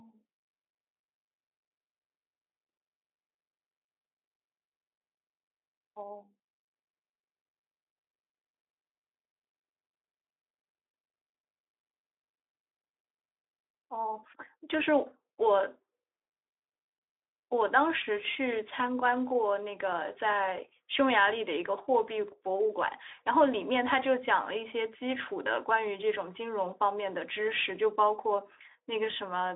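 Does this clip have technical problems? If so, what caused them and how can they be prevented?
No, there are no technical faults; the speech carries the narrow telephone-style band and light coding texture of a Speex link, with nothing above about 3.8 kHz, which is how that path normally sounds.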